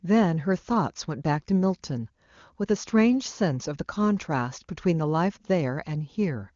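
No technical faults are audible.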